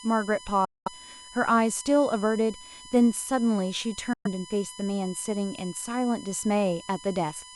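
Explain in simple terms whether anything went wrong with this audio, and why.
Electrical noise from the USB connection leaked into the audio path, adding a steady USB whine at 1 kHz, strongest at 3 kHz, throughout this speech. Audio packets likely failed to reach the headphones in time, a Bluetooth dropout, so the sound cuts out from 0.65 to 0.88 s and from 4.13 to 4.27 s.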